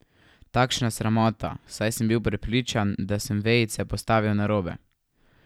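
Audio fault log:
No faults can be heard in this speech recording. Nothing in it calls for a time stamp or a fix.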